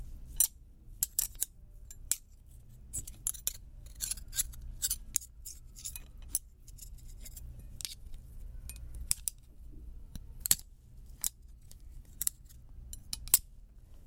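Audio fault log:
Nothing to flag here; the sound comes across just as it should, with no trouble heard anywhere along the way.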